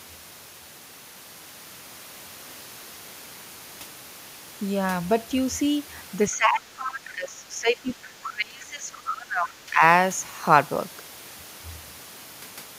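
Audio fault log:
6.29–7.91 s, speech suppressed in double talk: the talker's level sinks, by roughly 20 dB at worst, likely because the echo canceller ducked everything while both sides spoke.
8.23–8.30 s, other side's voice leaking through: a brief scrap of a second voice, about 15 dB under the talker, likely loudspeaker echo the canceller left in the microphone.
8.29–9.82 s, speech suppressed in double talk: the talker dips again, more deeply, around 25 dB, likely the canceller attenuating both voices when it could not separate them.
8.93–9.00 s, other side's voice leaking through: a fainter fragment of the far voice, about 25 dB below the talker, likely residual echo slipping past the canceller.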